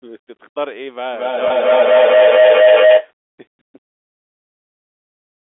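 At 1.13 s a feedback howl begins and runs until 3.14 s. Sound from the loudspeaker is picked up again by the microphone, and each trip round that loop comes back louder rather than weaker, so the repeats narrow onto a tone near 700 Hz that peaks about 15 dB above the speech. The loop comes round roughly every 200 ms. A spectrogram shows a bright horizontal line near 700 Hz, and the waveform grows a dense, rising envelope over the speech.

Inside the howl, from 1.48 to 1.50 s, packet loss with pitch repetition leaves about 20 ms of audio missing, which fits a single lost packet. The receiver filled the hole by repeating the last pitch period, so the sound briefly holds on a slightly buzzy, static pitch before normal speech resumes. On a waveform this appears as a short run of repeated cycles. The spectrogram shows harmonics that flatten and freeze for that instant. All of this sits within the 300 to 3500 Hz telephone band of the G.711 line.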